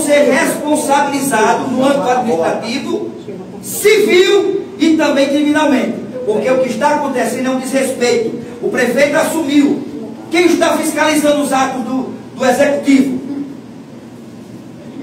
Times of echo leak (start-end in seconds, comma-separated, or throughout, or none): none